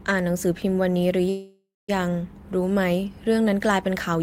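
A speech clip with a call audio freeze from 1.29 to 1.90 s: the last sound smears into a fading buzz, then about 190 ms of silence, likely a jitter buffer running dry.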